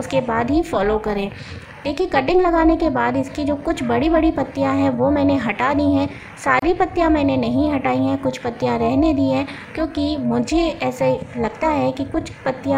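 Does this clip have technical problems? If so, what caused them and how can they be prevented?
Yes. Overlap-add ripple runs through the whole clip: the level pulses up and down by about 11 dB at around 400 Hz, giving the sound a metallic buzz with extra tones around each note. The audio was split into windowed frames and rebuilt with a window and overlap whose gains don't add up to a steady total, so the level rises and falls once every frame. To prevent it, use a window and hop size pair that meets the constant-overlap-add condition, such as a Hann window at 50% overlap.

A gap at a join of encoded pieces opens from 6.59 to 6.62 s, a silence of about 29 ms with smeared edges, after which the sound picks up exactly where it left off. Two separately encoded segments were butted together without removing the encoder's start-up delay and end-of-stream padding, so that dead time sits at the seam. 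To prevent it, trim the encoder delay and padding using the stream's gapless metadata, or encode the material as one continuous piece.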